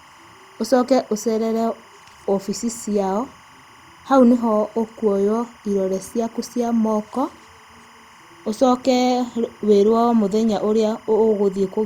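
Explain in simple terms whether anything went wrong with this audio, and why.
Yes, something went wrong: there's timecode bleed running under the speech for the entire clip. Timecode is a buzzy signal used to keep recording gear in sync, and here some of it leaked across from a neighbouring cable or track. You hear it as a faint, steady chirpy warble flipping between two high pitches, roughly 1 and 2 kHz, sitting well below the speech. Its rhythm fits 25-frame timecode.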